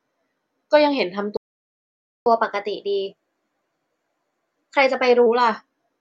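At 1.37 s the player most likely ran out of buffered data or had its thread blocked, so output stopped: a playback stall. The speech cuts off mid-flow into silence for about 0.89 s, resuming at 2.26 s.

From 2.26 s the player works off its backlog with catch-up at higher speed, resampling the audio to run 1.1 times faster. Until 5.26 s the speech sounds hurried and raised in pitch by roughly a semitone and a half, then drops back to normal.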